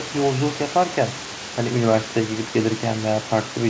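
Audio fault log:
No faults detected.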